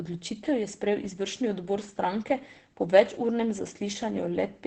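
From start to finish the speech sounds muffled and hoarse, with a dull top end, and the damage is heavy. The likely cause is Opus compression at a very low rate: the sound points to the encoder running in its speech-oriented SILK mode at around 12 kbps with wideband bandwidth, where the narrowed band and coarse coding strip brightness and leave that husky texture.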